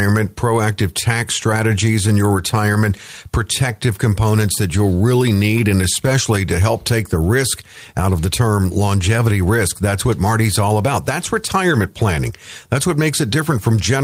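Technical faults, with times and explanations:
Nothing stood out on listening to this speech recording.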